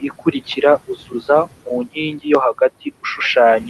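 Right from the start to 0.57 s, there's speech cut by the noise suppressor: about 150 ms of quieter speech gets mistaken for background and pulled down as much as about 13 dB, so it sounds swallowed. Throughout the clip you can hear noise suppressor artifacts, with the room noise pushed down about 17 dB between phrases as the suppressor works frame by frame.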